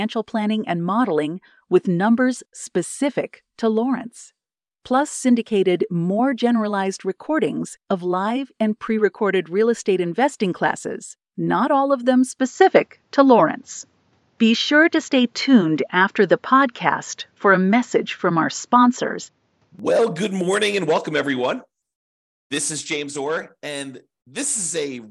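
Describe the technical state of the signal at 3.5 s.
At 3.5 s the audio is intact, with no dropout, distortion or other audible fault at that moment.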